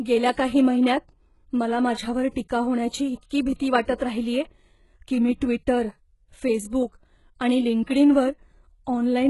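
Throughout, the speech carries heavy damage, likely from HE-AAC compression at a very low bitrate near 12 kbps. Treble is rebuilt from copied lower bands and stops at 11.5 kHz, so s sounds turn gritty.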